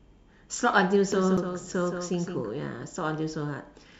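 From 1.12 s to 2.51 s, a second, slightly quieter copy of the speech (about 5 dB down) trails the original by roughly 150 ms, dry and full-band, cutting in and out abruptly. This doubled audio track likely comes from the same signal being captured again through a slower path.

At 1.37 s, within that doubled stretch, a tick and a brief silence of a few milliseconds interrupt the sound before it resumes from a different point. This CD skip happens when the laser jumps to another turn of the disc's spiral, so playback mutes momentarily and continues elsewhere.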